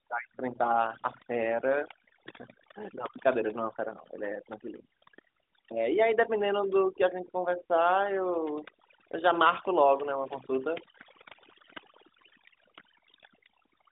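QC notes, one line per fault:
Throughout, overdone noise removal: the suppressor gates frequency bands near its noise estimate hard, so the background drops and breaks up into twinkling specks, and the speech's quiet detail within the narrow telephone band goes too.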